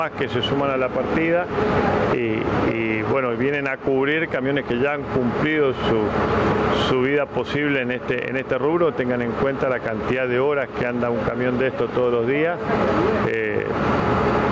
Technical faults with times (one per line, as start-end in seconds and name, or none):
0.00-14.51 gain pumping